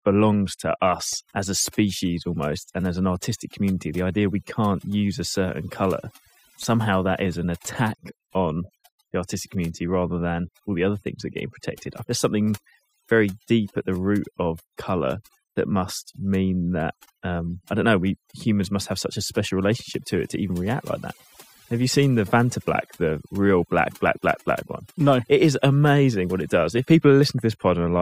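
Speech clip with overdone noise removal throughout: the denoiser clamps bands near its noise estimate, so the background breaks into twinkling, warbling specks and quiet parts of the speech vanish with it.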